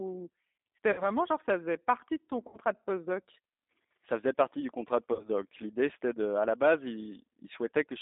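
From start to finish the speech carries the sound of the G.729 codec, and its damage is plainly audible. The line passes roughly 250 Hz to 3.7 kHz, so the voice sounds thin and boxed in. The rough, slightly synthetic texture comes from rebuilding each frame out of a vocal tract filter, a pitch predictor and a few pulses rather than from the waveform itself, which fits an 8 kbit/s G.729A stream.

Three dropouts follow, each showing VoIP packet loss concealed by the speech codec: at 0.92 to 1.04 s, 2.48 to 2.59 s and 5.13 to 5.29 s. Each covers about 60 ms of missing audio, consistent with two lost packets. The decoder carries its last pitch and filter forward with falling gain, so the sound smears into a buzzy tone or coloured noise that fades. Because each frame depends on the previous one, the voice stays weak and distorted briefly after audio resumes, which stretches each disturbance past the 60 ms that was lost.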